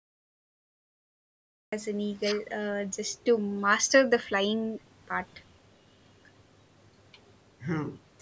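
From the top there's dead digital silence until about 1.73 s, and then the speech just drops in mid-sound. That's a cut-off start: the recording or stream kicked in late, so instead of a natural onset you land partway through whatever was being said, with no attack or fade-in leading up to it. It comes across as abrupt, like the first syllable got sliced off, and the band-limited call-microphone sound, with nothing above 8 kHz, is there from that first instant.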